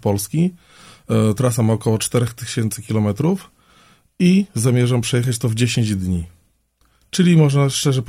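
Nothing in the audio stood out as a technical fault on listening.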